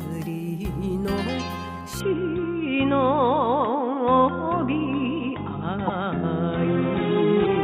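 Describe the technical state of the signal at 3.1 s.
At 3.1 s the sound is band-limited, nothing above 3.8 kHz, from 2.00 s to the end, likely an input switched to a poorer device. The spectrogram shows a flat top edge and the waveform a level step of roughly 5 dB at the switch, with no gap and faint new noise.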